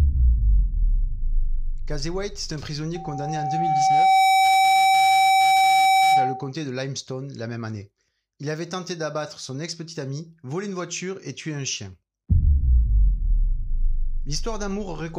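From 2.95 to 6.51 s there's loudspeaker feedback squeal: the mic hears its own speaker, and a 767 Hz tone swells up, finishing louder than the sound.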